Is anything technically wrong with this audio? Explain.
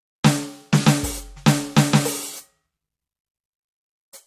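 No, nothing technically wrong is audible in this music clip.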